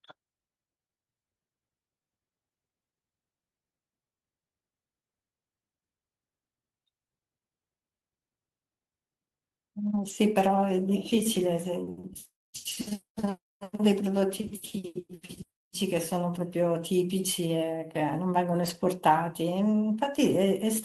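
At 9.85–10.11 s, 11.35–11.41 s and 18.65–18.83 s the speech turns briefly rough and grainy. These are lost packets rebuilt from error correction, played from low-bitrate copies carried in the following packets. Unlike plain loss concealment, nothing drops out or smears, and the speech stays continuous, just coarser.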